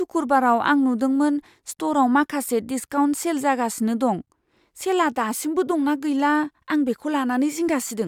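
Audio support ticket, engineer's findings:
No audible faults found in the speech recording.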